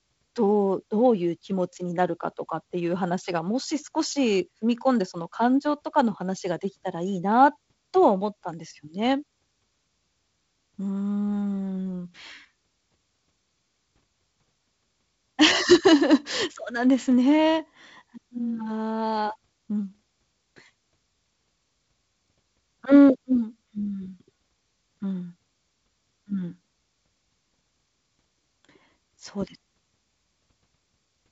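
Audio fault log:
The speech is carried by G.722 wideband telephone coding, with content reaching up to about 7.7 kHz and nothing above it, and the light noise in the coded bands fits the codec running at its 48 kbit/s rate.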